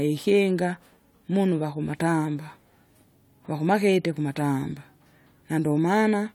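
Nothing in this bit of speech stands out as a technical fault at any point.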